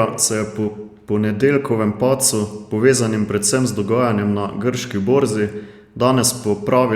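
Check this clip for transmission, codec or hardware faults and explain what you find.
Nothing in the speech here points to a transmission, codec or hardware fault.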